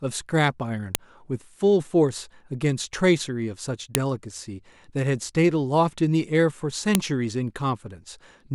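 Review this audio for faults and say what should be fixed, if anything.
File header played as audio: snaps at 0.95, 3.95 and 6.95 s, where each piece's header bytes play as samples. Unlike splice clicks, they recur every 3.0 s whatever the speech is doing. Strip the header from every piece before joining or streaming, and pass only the sample data.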